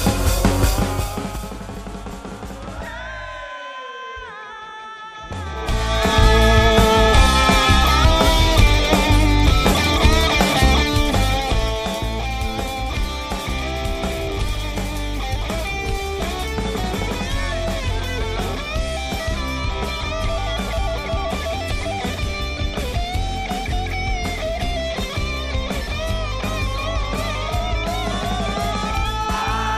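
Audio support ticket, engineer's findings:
Gain ramp applied in unsmoothed 2 dB steps, around ten per second, 0.65–1.58 s: zipper noise, a ticking riding on the sound as the level falls roughly 15 dB.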